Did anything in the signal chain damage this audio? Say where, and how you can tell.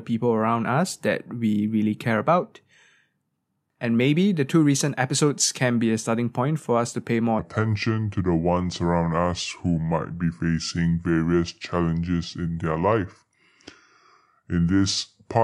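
Yes. From 7.39 s, right after "us to pay more", to the end of the clip, the section at the wrong speed plays at 0.757x, dropping pitch about five semitones with slowed timing. The likely cause is a playback or editing stage running that section against the wrong clock.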